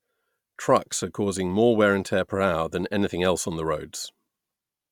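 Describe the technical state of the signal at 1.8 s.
At 1.8 s the speech signal is intact, with no technical fault present at that moment.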